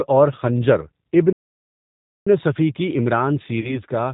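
All the way through, the speech has that slightly rough, synthetic edge of the G.729 codec at 8 kbit/s, and the damage is plainly audible. Everything above 4 kHz is gone, and the voice is rebuilt from a filter plus a handful of pulses per frame rather than carried faithfully.

From 1.33 s to 2.27 s the sound just stops mid-flow for about 0.94 s before picking up again. That's a playback stall, likely the player running dry of data or its thread getting blocked until it recovered.

Then at 3.60 s there's a short patch, running to 3.81 s, where the voice gets smeared into a buzzy tone or coloured noise that fades, and stays weak for a bit afterwards. That's VoIP packet loss concealed by the speech codec. About 30 ms went missing, which fits a single lost packet. The decoder guessed from its last pitch and filter while dropping the gain, and it took a while to settle back.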